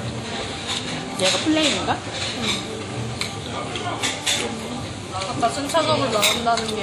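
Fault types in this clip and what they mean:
WMA compression: The audio was likely squeezed through an early Windows Media Audio encoder at a low bitrate, fitting about 48 kbps, which smears quantisation noise across long blocks and drops weak detail. It plainly rings and washes, with breathing hiss and nothing above 19.6 kHz.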